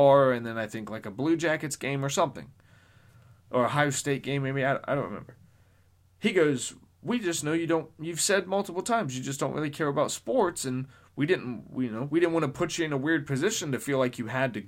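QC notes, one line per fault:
Nothing stood out on listening to the speech here, so there is nothing to log.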